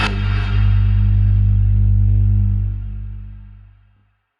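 A brief stutter at 2.08 s and again at 3.96 s, each snippet heard three times: repeated frames, where 60 ms, then 30 ms, of compressed audio played twice more.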